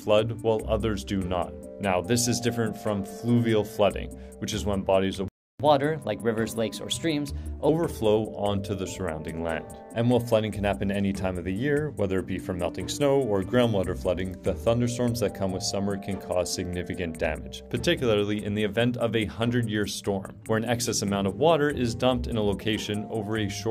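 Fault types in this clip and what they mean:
Playback stall: the output falls silent mid-flow from 5.28 s to 5.60 s, a gap of about 0.31 s, and then the sound resumes. The likely cause is the player running out of buffered data or its output thread being blocked.
Catch-up at higher speed: right after the stall, from 5.60 s to 7.69 s, the player resamples its backlog to run 1.15 times faster, raising the pitch by roughly two semitones to recover lost time before it drops back to normal speed.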